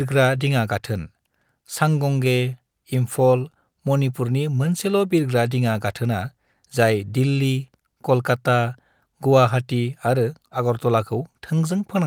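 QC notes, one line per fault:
Nothing to log on this one; the speech runs along from beginning to end without a single moment that catches the ear.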